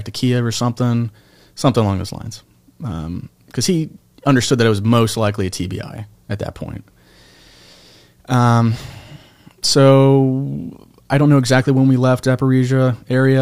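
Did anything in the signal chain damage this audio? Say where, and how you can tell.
No, nothing in this speech shows signal chain damage.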